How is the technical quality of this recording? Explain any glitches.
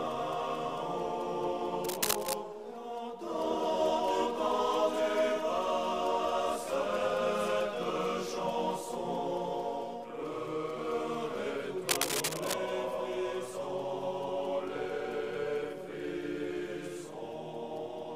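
Two bursts of cable scratch noise mar the recording, from 1.84 to 2.35 s and from 11.89 to 12.54 s. Each is a rough, crackling rustle roughly as loud as the sound itself, likely from a worn cable or connector being moved. On a spectrogram they appear as dense, broadband speckled smears, and on the waveform as jagged, irregular spikes.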